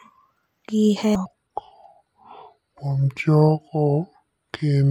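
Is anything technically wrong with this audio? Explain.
Yes. There are two faults.

At 1.15 s there is a CD skip. The laser has jumped to another turn of the disc's spiral. Playback mutes for only a few milliseconds, leaving a tick. The speech then resumes from a different point.

From 1.26 s to the end, the section is at the wrong speed. It plays at 0.70 times its original rate. The likely cause is playback against the wrong clock. Speed and pitch fall together, so the speech drops roughly seven semitones and sounds deep and slow.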